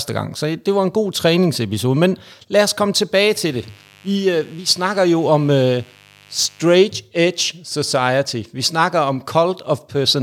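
From 3.35 s to 6.79 s, just after "lad os komme tilbage" and ending before "edge society", a mains buzz sits under the speech at roughly 30 dB below it. Sharp switching spikes from a dimmer, rectifier or unshielded lead enter twice per 50 Hz cycle, stacking harmonics well into the kilohertz range. That gives a raspy, steady buzz rather than the smooth, low sine-like tone of a plain 50 Hz hum.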